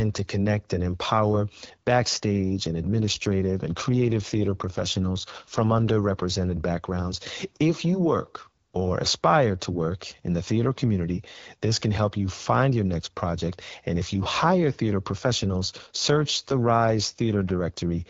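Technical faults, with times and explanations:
2.70–6.54 s and 15.09–18.10 s, AMR rate drop: The speech turns rougher and more synthetic with no gap or band change, which fits a drop from 12.65 to 8.85 kbit/s.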